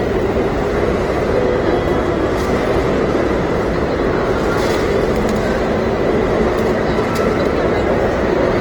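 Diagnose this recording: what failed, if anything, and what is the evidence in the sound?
Opus compression, throughout the clip, at the codec stage. Tonal parts of the sound come across rough and grainy, with a noisy texture laid over them, and the codec damage is plainly audible, yet there is little of the hollow swirling associated with MP3. Bandwidth is not narrowed: content reaches up to about 20.1 kHz, which points to fullband music-mode (CELT) coding at a starved rate, likely around 16 kbps. CELT preserves each band's energy but, short of bits, fills bands with folded or noise-like detail, hence grain instead of holes.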